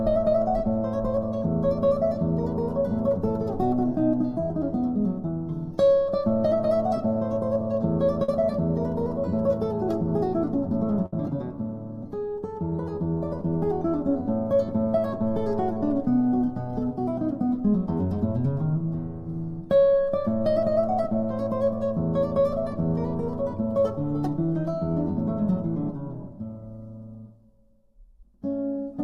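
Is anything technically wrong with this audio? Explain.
Yes. There are two kinds of network fault.

Short concealed packet loss occurs at 8.23 to 8.29 s and again at 17.98 to 18.00 s. Audio failed to arrive in time, about 50 ms and then 10 ms of it, and the receiver extended the preceding sound to cover each hole. Each sounds like a brief smear or wobble. On a spectrogram it shows as a short stretch of repeated or smoothed texture. The waveform shows a slightly too-regular segment.

A burst of packet loss occurs at 11.06 to 11.13 s. About 60 ms in a row went missing, and the receiver continued the last sound for roughly 63 ms while turning it down, so a held buzz or hiss fades before the audio resumes further along. The spectrogram shows frozen, decaying bands with a jump at the resume. The waveform shows a tapering envelope.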